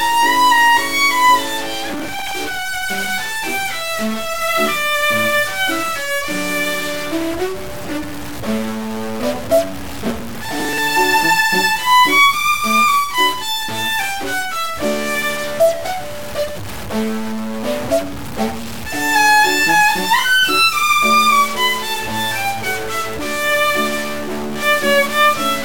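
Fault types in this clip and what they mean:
Stuck bit: distortion runs through the whole sound, with hiss filling the pauses, likely from one data bit held at a fixed value.
Processor overload crackle: bursts of gritty tearing at 1.94 to 2.33 s and 10.06 to 10.78 s, where an overloaded processor skipped many short blocks, fitting buffers of about 5 ms.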